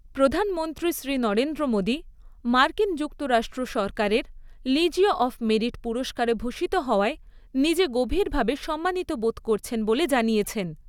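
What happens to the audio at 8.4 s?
At 8.4 s the audio carries on intact, with no dropout, click, distortion or other fault at that point.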